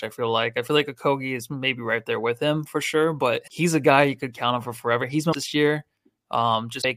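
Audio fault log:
3.44–3.48 s, 5.29–5.35 s and 6.78–6.85 s: damaged data in a compressed stream. Each is a short glitch lasting about 40 to 70 ms. The first falls between "him for sure but" and "he's a guy you". Corrupt bytes in the compressed stream made the decoder misread those frames. It lost sync and hunted for the next frame header. The garbled frames are the glitch.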